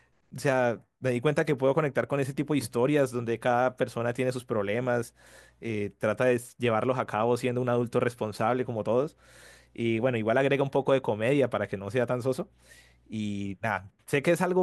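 Nothing here stands out as a technical fault, so there's no point in the speech where anything goes wrong.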